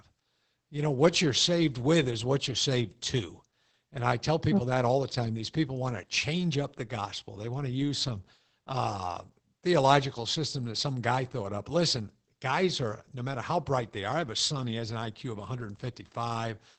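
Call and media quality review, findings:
Opus voice compression, throughout the speech clip. Muffled, slightly hoarse and robotic timbre; plainly audible codec damage. Probable component: Opus encoder in SILK linear-prediction mode, wideband, consistent with about 12 kbps and 20 ms frames. Coarse excitation coding flattens detail. Spectrogram: hard ceiling near 8.5 kHz with nothing above, smeared harmonics, blocky texture repeating at a 20 ms frame rhythm. Waveform: envelope intact, fine structure simplified.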